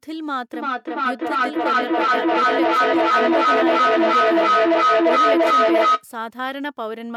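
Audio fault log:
0.54–6.07 s, feedback echo between two devices: a second device on the same call is playing this microphone's signal back into the room, and the microphone captures it again. Each echo canceller only removes its own device's playback, so nothing breaks the loop. Every syllable returns at a steady interval of roughly 300 ms, and the loop gain is high enough that the repeats build rather than fade, peaking about 10 dB above the speech itself.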